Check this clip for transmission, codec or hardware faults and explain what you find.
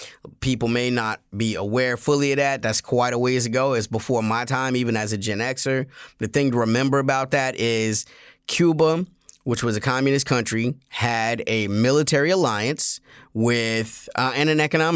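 No transmission, codec or hardware faults found here.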